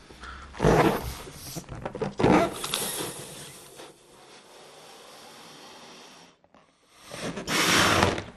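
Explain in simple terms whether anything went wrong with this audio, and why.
Several things went wrong. Throughout, the sound is dull and clearly gurgly, with a grainy edge. That points to MP2 compression, likely at too low a data rate. The format splits audio into many frequency bands, and when bits run short the upper bands switch off and the rest become coarse.

From 1.03 to 1.82 s, and again from 7.72 to 8.14 s, bubbling, squelchy chirps appear. This is DAB burbling. Transmission errors slipped past error correction into the compressed data, so individual frequency bands briefly jump to the wrong level.

Between 2.84 and 4.27 s the level drops substantially, and a fast ticking, zipping texture rides on the sound while it falls. This is zipper noise. The volume was lowered in about ten abrupt steps per second rather than smoothly, and each step adds a tiny click.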